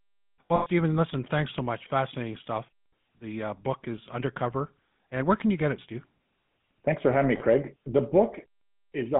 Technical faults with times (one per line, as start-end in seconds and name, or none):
0.00-9.19 GSM full-rate codec
0.48-0.67 lost GSM frames
7.38-7.41 lost GSM frames